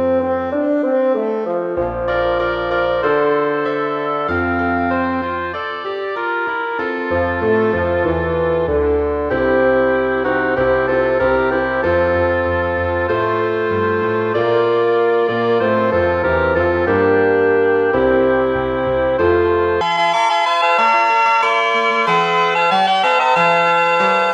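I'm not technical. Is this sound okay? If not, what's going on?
No. From 19.81 s to the end, the sound suddenly turns high-pitched and hurried: a section at the wrong speed, playing at 1.95 times normal speed, likely from a mismatched playback clock.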